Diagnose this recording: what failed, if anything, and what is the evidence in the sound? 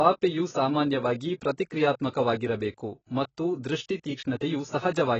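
The fault is at the codec stage. Throughout the speech, nothing sounds above 7.9 kHz. The tone is dull and heavily smeared. This is likely AAC compression, AAC-LC short of bits, fitting roughly 18 kbps. The encoder discards the top band and quantises the rest coarsely.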